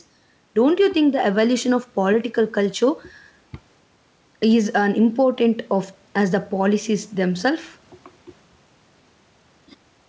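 Throughout the speech, the gain pumps with a swing of around 5 dB that squashes the level. This is gain pumping, likely from input gain set far too high with a fast limiter clamping each peak.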